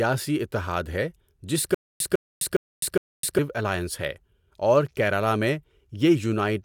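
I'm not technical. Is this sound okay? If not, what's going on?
No. There is a stutter with silent gaps from 1.74 to 3.39 seconds. A short slice of speech, about 0.15 seconds long, plays and is followed by roughly a quarter second of dead silence, and this repeats four times at a steady beat of about 0.41 seconds. The likely cause is the player or stream stalling, replaying its last fragment each time it retried and then running empty. The speech that belonged in those gaps is missing.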